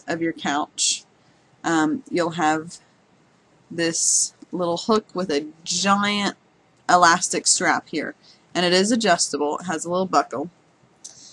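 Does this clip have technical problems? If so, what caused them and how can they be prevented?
No, there are no technical problems to report here.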